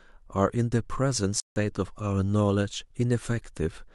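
From 1.40 to 1.56 s the speech drops into a block of digital silence: 160 ms of samples replaced by zeros, as when output buffers aren't filled in time. Unlike a faded dropout, it cuts abruptly, leaving a clear hole.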